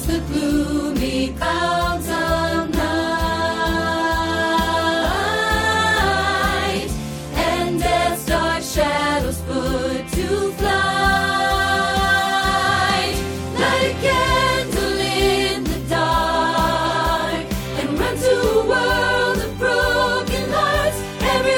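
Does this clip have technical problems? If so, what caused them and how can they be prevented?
Yes. At 1.41 s, compressed frames are skipped: roughly three 23.2 ms frames, about 70 ms, never play, so the audio jumps ahead by that much. Prevent this with checksummed storage and error-free transfer of the encoded file.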